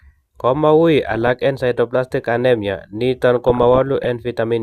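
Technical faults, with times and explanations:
1.12 to 1.30 s: DAB burbling. Brief burbling comes just before "en sideroblastic anemia". Bit errors slip past error correction into the MP2 data. Corrupted scale factors make single sub-bands jump in level for up to a frame.
3.36 to 4.09 s: DAB burbling again, longer. It spans 32 frames at an error rate of about 0.5 percent.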